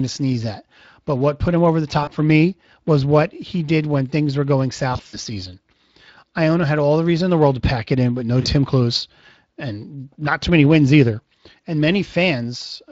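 Speex codec damage runs through the whole speech clip. At a setting the sound suggests is around 20 kbps, this CELP coder has too few bits to rebuild the excitation cleanly, so the voice carries a plainly audible hoarse, noisy grain. Any content above 8 kHz comes through as a shaped noise wash rather than real detail.

VoIP packet loss concealed by the speech codec first breaks in from 2.03 to 2.10 s. The decoder kept extrapolating from its last pitch and filter state, so the gap is stretched into a short tone or coloured noise that fades. The longest episode spans 4.93 to 5.18 s, with dropouts scattered over about 200 ms rather than one block. The longest run is 60 ms, and the voice stays weak for a moment after each return because every frame builds on the one before. Brief repeats follow at 8.41 to 8.47 s and at 11.61 s, each a quick concealed gap.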